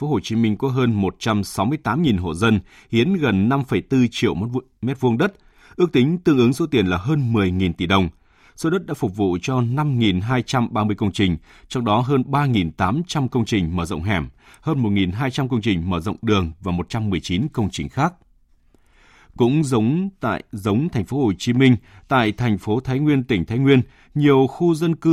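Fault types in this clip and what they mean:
No faults can be heard anywhere in this recording.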